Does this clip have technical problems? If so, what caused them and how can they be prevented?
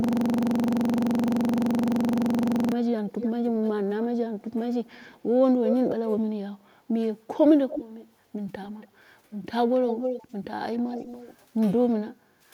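Yes. A system hang loop runs from the very start to 2.72 s. The playback stalled while the audio hardware kept cycling one 42.67 ms piece of sound about 63 times. That produces a buzz at 23.4 Hz, which fits a 2048-sample buffer being replayed. Prevention: make the audio driver mute its output when the host stops supplying new data.

An echo leak appears at 3.1 to 5.76 s, 7.69 to 7.84 s, 8.64 to 8.88 s and 9.88 to 11.37 s. A delayed copy of the speech trails the original by 302 ms in the first stretch and by 280 ms afterwards. It sits around 10 dB down at first, about 5 dB down in the brief 7.7 s scrap and the final stretch, and roughly 20 dB down near 8.7 s. This is likely loudspeaker sound that the far side's echo canceller failed to fully remove before sending it back. Prevention: use a headset, or improve that side's echo canceller so it adapts to the room's echo path.

Background gated by the echo canceller occurs from 12.15 to 12.46 s. 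The room sound sinks by up to about 18 dB for roughly 300 ms, because the canceller clamped the microphone hard while the loudspeaker was active and then released it. Prevention: soften the canceller's suppression and add comfort noise so the background does not dip.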